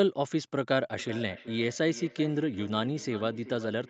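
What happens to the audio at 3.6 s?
At 3.6 s the speech is inside a feedback echo between two devices, running from 0.99 s to the end. A second device replays this microphone's signal, which is picked up again, so the speech returns roughly every 400 ms, thinner and ringing, peaking about 15 dB below the direct speech.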